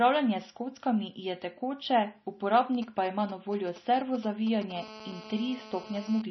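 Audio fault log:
Throughout: MP3 compression. The speech has nothing above 5.9 kHz. The treble stops at a hard edge. Weak detail flickers in and out from frame to frame, giving a watery, swirly texture. S sounds turn metallic and chirpy, and attacks smear. The damage is heavy. The likely cause is an MP3 encoder starved of bits, which fits a low bitrate near 24 kbps. With so few bits, it drops the top band and zeroes faint frequency lines.
2.75 to 4.72 s: GSM signalling bursts. A galloping dit-dit-dit pattern of short buzzes sits about 15 dB under the speech. The buzzes are pitched at 217 Hz. A nearby 2G phone is exchanging brief radio bursts with the network while signalling. The audio circuit rectifies those pulses into sound. Because the phone sends only groups of bursts, the noise comes in clusters rather than a steady tone.
4.76 to 6.22 s: GSM phone buzz. The interference turns into a continuous, hard, raspy buzz at 217 Hz, about 16 dB below the speech. 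It is rich in harmonics and has no link to the speech. The phone is now on a call and transmits 217 bursts every second without a break. The audio circuit rectifies each radio pulse, so the burst rate becomes an audible tone.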